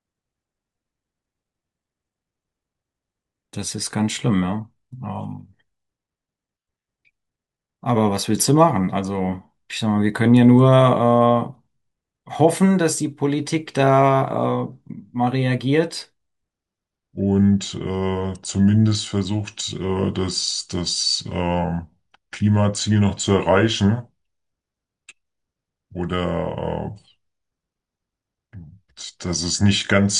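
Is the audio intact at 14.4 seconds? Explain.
Yes, the speech at 14.4 s plays through intact, with no dropout, click, distortion or other fault at that moment.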